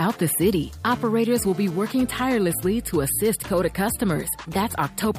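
From 0.86 to 2.24 s a hard, raspy buzz at 217 Hz, rich in harmonics, sits about 18 dB below the sound. This is GSM phone buzz: a nearby 2G phone's data-transfer bursts, rectified by the audio circuitry, stopping when the transmission pauses.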